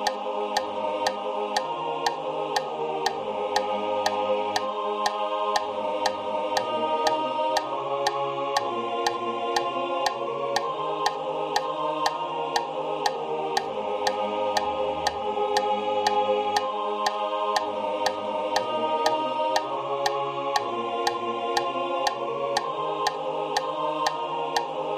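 No technical faults can be heard anywhere in the audio. There is nothing in the sound at any moment that calls for comment.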